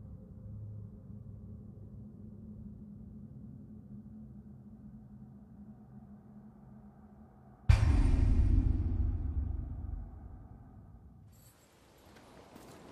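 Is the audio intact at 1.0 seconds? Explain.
Yes, the audio at 1.0 seconds plays through cleanly, with no dropout, click, distortion or other fault at that moment.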